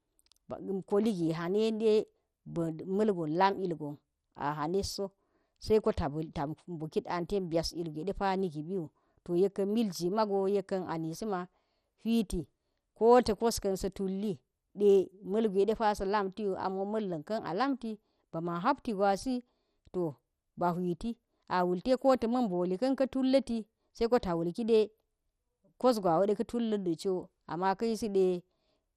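Speech with MP2 compression damage running throughout: nothing is present above 14.3 kHz, the upper bands flicker in and out, and the surviving ones carry a gurgling, granular roughness. That is the likely result of MPEG Layer II starving its sub-bands of bits, which fits a rate near 64 kbps.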